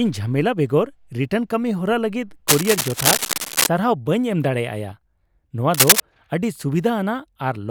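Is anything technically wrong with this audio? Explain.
Yes. Cable scratch noise appears from 2.48 to 3.67 s and again from 5.74 to 6.00 s. Dense, uneven scratching sits over the speech, about as loud as it at first, then somewhat louder. A worn cable or connector being moved, its contact resistance jumping, is the likely cause.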